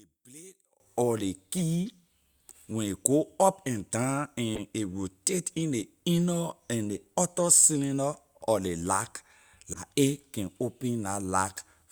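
From 0.0 to 0.8 s, before "or ley", the speech drops about 26 dB to a faint residue, likely one channel inverted, cancelling in mono. The waveform is nearly flat; the spectrogram has little energy.

Corrupt frames decoded: after "or ley" at 1.57–1.62 s, between "go up and down" and "a rotate in ley" at 4.55–4.60 s, and at 9.73–9.82 s. Each is a brief glitch lasting a few frames, louder each time, appearing as a misplaced spectral smear.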